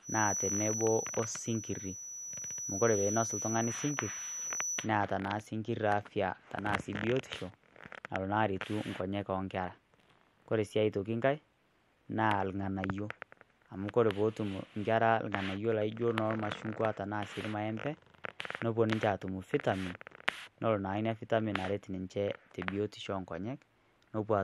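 From 0.0 to 4.89 s, a feedback whistle near 5.9 kHz sits behind the speech a few decibels down. It is likely a loudspeaker-to-microphone loop held just at the feedback point. It shows as a thin horizontal line on the spectrogram.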